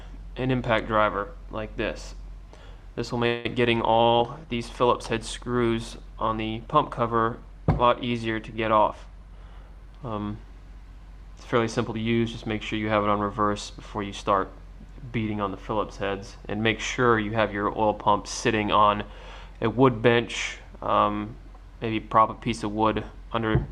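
At 3.26 s the audio holds its last sound as a fading buzz or hiss for 0.19 s, then resumes where it stopped. This is a call audio freeze, likely from delayed packets emptying the jitter buffer.

From 3.81 to 10.29 s a call bitrate drop takes the encoder from 64 to 25 kbps. The top end narrows from 20 kHz to 12 kHz, and the sound turns coarse and dull.

From 8.85 to 12.01 s a jitter buffer speed-up plays the audio at 106% speed without changing pitch. About a fifth of a second is trimmed to cut the backlog, and the sound feels hurried.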